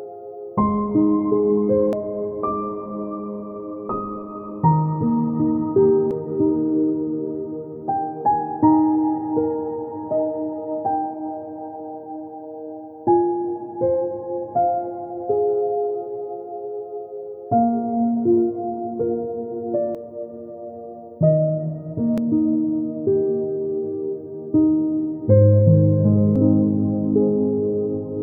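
Damaged data in a compressed stream produces brief chirps or blips at 1.93, 6.11, 19.95, 22.18 and 26.36 s. At each point corrupted bytes make the decoder misread its frames and lose sync, so it emits garbage until it locks onto the next valid frame header.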